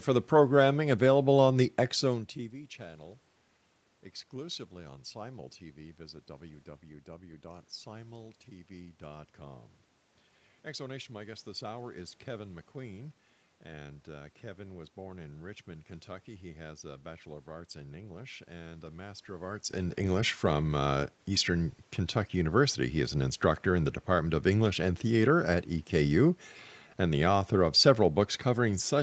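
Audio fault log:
Nothing stood out on listening to this speech recording.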